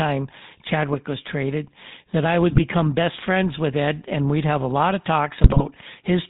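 The whole clip carries the sound of the GSM full-rate codec. It models the vocal tract and drives it with sparse, regular pulses. Nothing above 4 kHz survives. The speech sounds buzzy and gravelly, which fits 13 kbps GSM.

At 2.50 s to 2.60 s, after "was traded that I" and before "best friends with", GSM bit errors strike. Corrupted filter, pitch and gain values distort a few frames. The speech briefly squawks and gargles. A second burst runs 5.44 s to 5.64 s, after "have a lot of". It is longer, with a higher error rate of a few percent.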